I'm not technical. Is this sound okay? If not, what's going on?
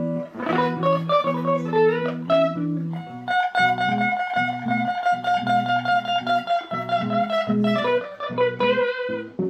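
No. Near the end, from about 7.98 s to 9.45 s, the sound turns dull, as if its sparkle has been dimmed. This is channel delay (comb filtering): one side of the stereo sound arrives a tiny bit late, only a couple of samples, a few hundredths of a millisecond. When both sides are combined, some very high frequencies cancel out, starting around 10 kHz, which takes the crispness off the top.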